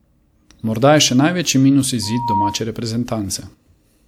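From 2.02 s to 2.62 s, just after "je še največji minus", the speech clip has loudspeaker feedback squeal: the microphone picked up the loudspeaker it was driving, and at 947 Hz the gain around that loop exceeded one. That frequency fed on itself, and a single steady tone rises out of the speech over roughly a third of a second, swelling to about the level of the speech before it stops.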